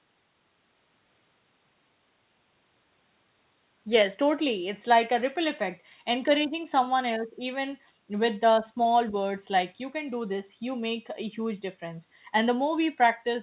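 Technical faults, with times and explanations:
No technical faults, so there are no times or explanations to give.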